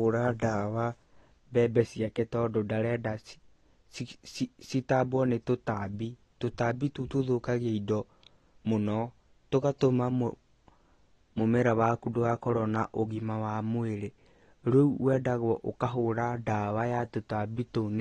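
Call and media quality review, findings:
AAC compression, throughout the speech. Nothing above about 13 kHz, so the top is dull. Smearing and a warbly, fizzy texture on sustained vowels and sibilants. Likely AAC-LC encoding at a low bitrate, consistent with about 32 kbps: coarse quantisation drops or noise-fills high bands and lowers the cut-off.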